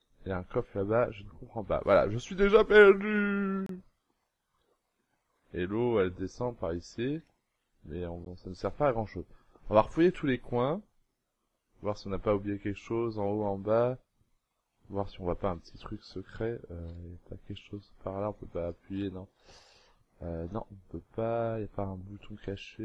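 At 3.66–3.69 s and 8.25 s the sound drops to silence for 29 ms and 13 ms, likely a Bluetooth stall, showing as flat waveform gaps and blank vertical spectrogram strips.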